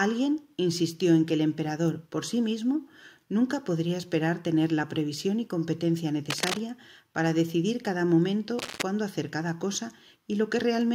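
A worn cable, connector or control being moved is the likely cause of two bursts of cable scratch noise, as the contact resistance jumps around erratically while the part shifts. From 6.3 to 6.6 s, and again from 8.58 to 8.83 s, dense, ragged noise is added to the audio, each burst lasting roughly a quarter to a third of a second. Both bursts sit only about 5 dB below the main signal, so the scratching and rustling is clearly heard over the sound.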